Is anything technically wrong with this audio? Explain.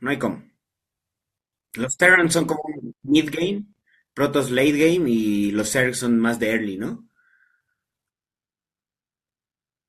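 No, nothing is technically wrong with this audio. The speech carries no fault to point to at any moment.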